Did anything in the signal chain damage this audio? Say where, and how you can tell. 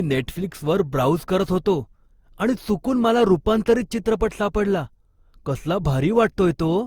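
Yes, at the codec stage, across the whole speech clip. The sound is swirly, smeared and hollow beyond what a single encode at a rate fitting Opus around 64 kbit/s would give, and consonant attacks are blurred. The likely cause is generation loss from roughly seven repeated lossy passes, each requantising on a shifted frame grid so noise accumulates. A spectrogram would show accumulated noise throughout the spectrum up to the 20.2 kHz ceiling and soft, smeared onsets.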